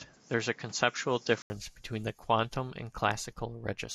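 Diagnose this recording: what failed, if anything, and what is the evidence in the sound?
For the first 1.5 s the speech is band-limited, with nothing above 7.6 kHz and a noise floor roughly 30 dB down, then an 80 ms gap and fuller sound at matching level. This likely points to an input switched to a poorer device at the driver stage, with a narrower-band microphone in use before the change.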